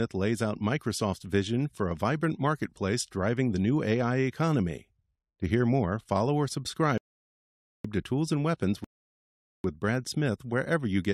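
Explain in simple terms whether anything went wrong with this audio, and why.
Yes, the speech stops twice with a rebuffering stall: from 6.98 to 7.85 s, right after "hear more follow or", and again from 8.84 to 9.64 s. Each time the player ran out of downloaded audio and went silent for nearly a second until more arrived. Unlike a dropout, nothing is skipped: the speech picks up exactly where it paused, so the clip just runs longer.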